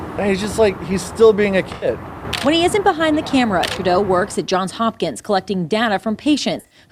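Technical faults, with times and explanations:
1.74–1.88 s and 6.60–6.78 s, AAC frame loss with concealment: about 85 ms of audio lost each time, the second scattered across 128 ms with its longest run around 40 ms. The decoder rebuilds each gap from the last good spectrum, so it sounds smeared and noisy. A spectrogram shows blurred, detail-free blocks, and the waveform shows no clean gap.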